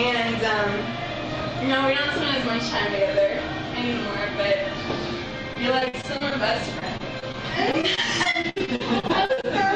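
From 5.53 to 6.33 s, 6.79 to 7.35 s and 7.71 to 9.45 s, repeated packet loss (robotic sound) chops the audio. Many short holes, up to 66 ms, are each bridged by repeating the preceding sound, rather than one clean dropout.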